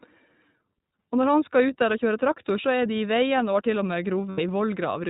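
Speech heard through the iLBC codec, with plainly audible coding damage throughout: a slightly rough, synthetic edge and nothing above 4 kHz, so a spectrogram shows a hard ceiling there. The 20 ms framing fits iLBC's 15.2 kbps mode, with each frame's excitation coded independently. Between 4.30 and 4.40 s come lost iLBC frames, about 80 ms of missing audio. The decoder fills the gap by repeating the last pitch cycle mixed with noise, so it sounds like a held, faintly buzzy vowel. On a waveform this shows as a short run of near-identical periodic cycles. The spectrogram shows flat, unchanging harmonic bands, and normal speech returns almost immediately afterward because each frame decodes independently.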